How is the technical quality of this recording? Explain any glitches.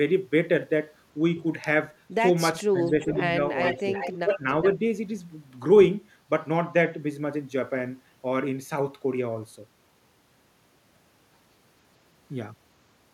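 The recording has clear glitches between about 2.1 and 4.8 s, all pointing to echo cancellation struggling during overlapping talk.

Speech suppressed in double talk at 2.14–2.22, 2.69–3.38, 3.74–3.92 and 4.24–4.81 s: the speech dips by roughly 10 to 20 dB, likely because the canceller ducked everything during crosstalk, unlike a dropout's clean silence.

Echo leak at 2.85–3.18 and 3.63–4.66 s: a copy of the speech trails by about 0.42 s, first faint, then only about 5 dB below, likely uncancelled loudspeaker pickup, not reverb's smooth tail.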